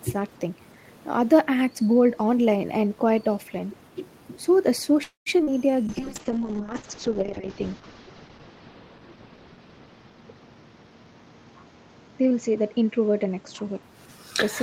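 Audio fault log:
1.70–1.91 s, speech suppressed in double talk: the talker's level dips by about 20 dB in pieces totalling around 150 ms. This is likely an echo canceller treating simultaneous talk as loudspeaker echo and turning the wanted speech down along with it.
5.03–5.29 s, call audio freeze: the last sound is drawn out into a fading buzz, then about 150 ms of silence, adding 227 ms of delay. Packets were likely held up and the jitter buffer ran dry; nothing is lost, speech simply resumes late.
5.38–5.42 s, skip ahead: playback jumps forward, dropping roughly 70 ms of speech, with the two sides joined by only about 8 ms of bridging. Later audio was already queued, so the backlog was cut and the delay shortened.
5.43–5.50 s, short concealed packet loss: 40 ms of audio failed to arrive and was replaced by 39 ms extrapolated from the preceding sound, then blended back. It comes across as a brief smear.
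5.49–6.36 s, jitter buffer slow-down: speech runs at 93 % of normal speed with unchanged pitch, stretched by 68 ms through repeated pitch periods. The receiver was rebuilding its reserve, leaving sounds slightly drawn out.
5.89–13.89 s, call bitrate drop: encoding falls from 32 to 6 kbit/s, bottoming out for 1.87 s, and bandwidth narrows from 20 kHz to 8 kHz. The encoder, told to spend far fewer bits, codes coarsely, so speech turns muffled and rough until recovery.
10.10–11.34 s, jitter buffer speed-up: speech runs at 118 % speed, pitch intact, as roughly 200 ms of short pitch-period pieces are removed. The buffer held more audio than its target, so trimming it makes the delivery sound hurried.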